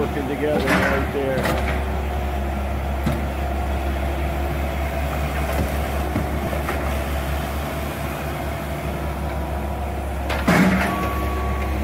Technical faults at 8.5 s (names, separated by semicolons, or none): none